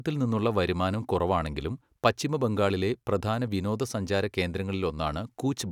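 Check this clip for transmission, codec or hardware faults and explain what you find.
Nothing wrong turned up anywhere in this recording.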